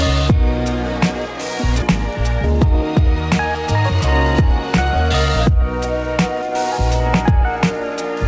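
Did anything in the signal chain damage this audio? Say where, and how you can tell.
Yes. At 1.82 to 1.92 s there is a skip ahead in the call's network and jitter-buffer stage. Roughly 0.7 s of audio was discarded while later packets were already queued, so playback jumps forward and the two sides are butted together with no gap. The waveform shows an abrupt seam with no silence, and the spectrogram shows a hard vertical discontinuity where the content changes suddenly. The spectrogram also shows the call codec's band limit, with nothing above 8 kHz.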